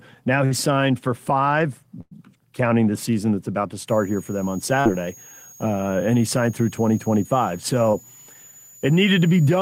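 At 0.45 to 0.53 s, just before "signed for five", a burst of packet loss drops about 60 ms of audio. The decoder stretches the last sound across the hole and fades it, so there is a held, dimming smear before speech picks up further along. A second burst at 2.01 to 2.13 s, after "signed for five" and before "counting the season that's", loses about 100 ms. The fill runs longer and decays into roughly 20 ms of silence. Unlike a dropout or edit, the gap is papered over with a sustained tail, not a clean cut.

From 3.88 s, after "season that's about to", a switching supply whistle appears and continues to the end. It is a thin high tone near 7 kHz, sitting about 25 dB under the speech, and its pitch wanders between roughly 6.6 and 7.0 kHz as the supply's load shifts. That drift separates it from a steady test tone or a fixed electrical hum.

Short concealed packet loss occurs at 4.81 to 4.87 s, where about 40 ms is missing, and at 7.91 to 7.95 s, where about 20 ms is missing. 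Each is heard as a brief wobble or smear where the receiver extrapolated the preceding sound and blended back in. These are too short to leave the held, fading tail of the bursts.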